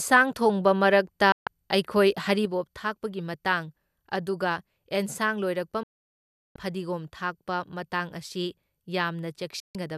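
At 1.32 s the speech cuts out for about 144 ms, to 1.47 s. This is a digital broadcast dropout. The receiver stopped getting usable frames and muted until good ones arrived. The sound fades out and back in within about 3 ms, so it reads as a clean hole. Whatever was said in that gap is gone.

From 2.45 s to the end, the level falls abruptly by about 6 dB. The likely cause is one channel dropping out. When the two channels are summed to mono, the shared content loses half its contribution, and anything carried only in the missing channel vanishes.

At 5.83 s a much longer dropout silences the speech until 6.56 s, about 720 ms. That length points to a run of roughly thirty lost frames. At 9.60 s a third dropout begins. It spreads over about 168 ms, with its longest silent stretch near 144 ms, and the sound returns by 9.77 s.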